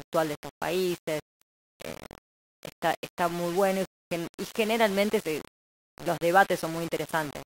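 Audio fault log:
throughout: low bit depth without dither. The speech sounds grainy and harsh, with gritty distortion that shifts with every sound and a noise floor only about 15 dB below the signal. The likely cause is undithered rounding to very few bits, which fits a 5-bit depth.
0.2–7.46 s: clock slip clicks. Faint, regular ticks run through the speech roughly every 0.1 s, around seventy in all. They point to mismatched clocks differing by about 200 ppm, each tick fitting a single dropped or repeated sample.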